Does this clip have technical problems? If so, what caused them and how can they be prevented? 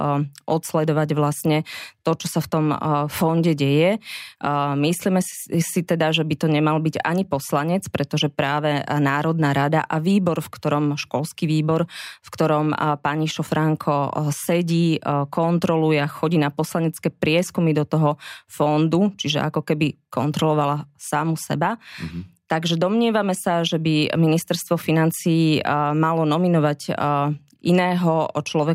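No, this clip has no technical problems, so there is nothing to trace to a cause or prevent.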